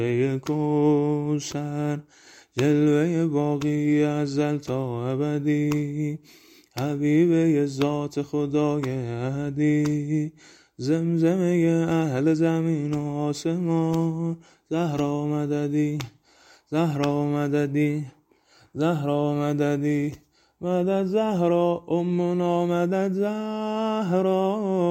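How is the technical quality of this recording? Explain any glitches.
No glitches turn up anywhere in this recording, so there's nothing here that needs explaining.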